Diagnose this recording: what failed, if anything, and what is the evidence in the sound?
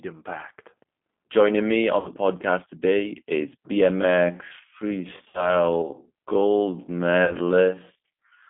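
The codec stage is at fault throughout: this speech clip has passed through a G.729 codec. Nothing sounds below about 200 Hz or above 3.5 kHz. The voice is rough and slightly synthetic. That fits an 8 kbit/s coder that rebuilds each 10 ms frame from a filter, a pitch predictor and a few pulses.

The network stage adds VoIP packet loss concealed by the speech codec. It occurs at 1.99–2.10 s, just before "podcast today is", then at 5.28–5.51 s and 7.25–7.35 s. About 60, 60 and 40 ms are missing. The decoder extends its last pitch and filter into a fading tone or coloured noise, and the recovery lags.

From 3.89 s, after "podcast today is", to the end, the pace abruptly halves while the pitch holds. This is a time-stretched section, likely from playback or editing software repeating short pieces to double the length.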